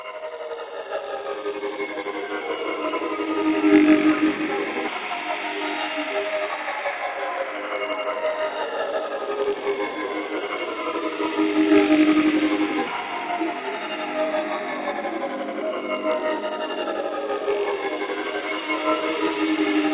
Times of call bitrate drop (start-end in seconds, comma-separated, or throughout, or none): none